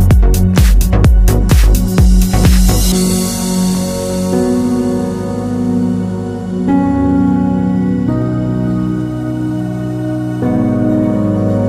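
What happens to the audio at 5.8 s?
Nothing goes wrong at 5.8 s; the audio plays through that moment intact, with no dropout, click or distortion to be heard.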